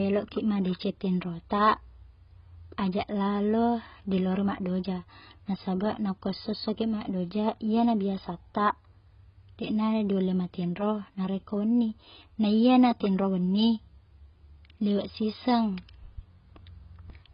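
AAC compression runs through the whole clip, from start to finish. Nothing is left above about 5.1 kHz, so the speech sounds dull and boxed in. The damage is heavy: sibilants turn fizzy and sustained sounds warble and smear. This is likely AAC-LC starved of bits, a rate that fits roughly 16 kbps. With so few bits per frame, the encoder drops the upper bands and quantises the rest coarsely, leaving gaps and noisy fill in the spectrum.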